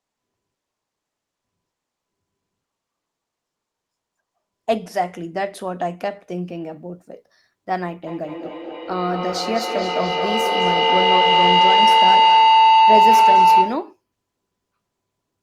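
From 8.07 s to 13.96 s a feedback howl builds. Two devices in the room share the call, so each microphone-to-loudspeaker trip adds gain. The tone narrows to around 1 kHz, pulses roughly every fifth of a second, and peaks about 10 dB above the speech.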